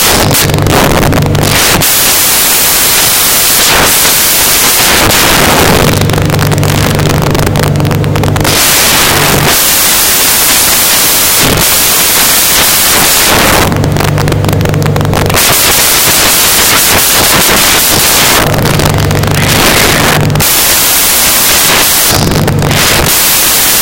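From start to end, samples are built from the wrong bytes. Rapidly changing low bits dominate each value, producing loud, harsh noise that is close to white on loud sounds.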